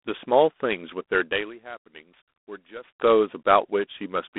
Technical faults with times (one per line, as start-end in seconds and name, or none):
0.00-4.38 G.726 ADPCM
0.47-2.98 loudspeaker feedback squeal